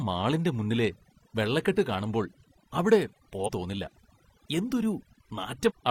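From start to end, the speech carries overdone noise removal. The reduction was set too hard. Frequency bands near the noise floor are pulled down or shut off, and soft parts of the voice go with them. The background drops and breaks up into twinkling specks.

From 3.44 to 3.50 s, and again from 5.65 to 5.72 s, compressed frames are skipped. Each time the audio jumps ahead about 300 ms, which fits several dropped frames of about 43 ms.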